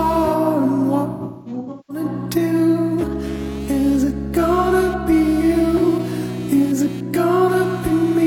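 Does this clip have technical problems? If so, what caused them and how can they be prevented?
Yes. Computer activity noise runs through the whole clip as a buzzing, chirping texture pulsing at roughly 200 Hz, well below the main sound. Processor or graphics load is disturbing the shared audio ground. Unlike steady mains hum, it shifts with computer activity. A separate USB audio interface or ground-loop isolator prevents it.

AAC frame loss with concealment hits 1.12 to 2.04 s. About 0.6 s went missing in scattered gaps, the longest around a fifth of a second. The decoder rebuilt these from the last good spectrum, leaving smeared, phasey patches rather than clean silent dropouts. Retransmission or error protection on the transport prevents it.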